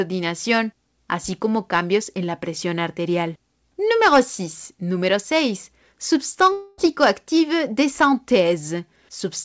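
Speech, and at 6.52 to 6.80 s there's a gap of about a quarter second where the sound turns into a fading buzz that fills nearly the whole hole before the talk picks up again with a chunk missing. That's likely a long network dropout, concealed rather than left silent, over a call path with nothing above 8 kHz, which fits G.722.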